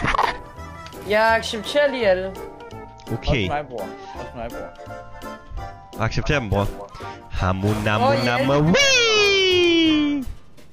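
No technical fault can be heard anywhere in the audio. Nothing in it calls for a time or a cause to be noted.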